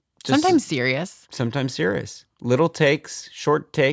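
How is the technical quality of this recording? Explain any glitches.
Nothing stood out as a glitch or technical problem on listening to this speech recording.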